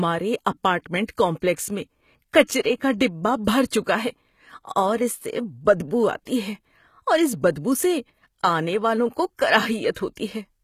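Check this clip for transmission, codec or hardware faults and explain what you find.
Yes, two codec faults are audible. Throughout, the treble sounds synthetic and gritty, with nothing above 14.9 kHz. The likely cause is HE-AAC compression at a low bitrate near 20 kbps, rebuilding the upper band from copied lower bands.

Pre-echo occurs at 1.06–1.08 s before "کمپلیکس میں کچرے کا", at 3.45–3.47 s, and at 6.25 s between "سے بدبو" and "ہے اور اس بدبو". In each case the transform block spreads quantisation noise ahead of a sharp onset, so a brief hiss of about 16–27 ms precedes a smeared attack.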